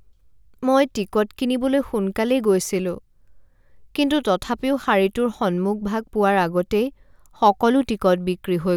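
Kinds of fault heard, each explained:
No technical fault can be heard in this speech recording. There is nothing here that calls for explanation.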